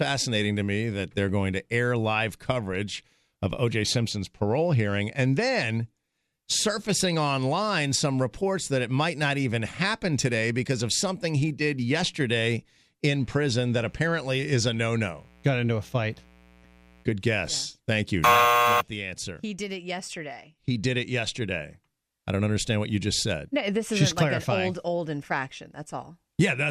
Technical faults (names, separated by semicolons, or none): mains buzz